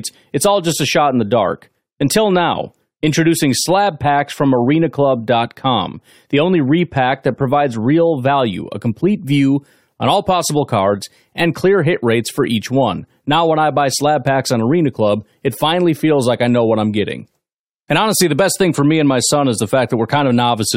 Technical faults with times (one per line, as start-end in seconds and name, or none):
none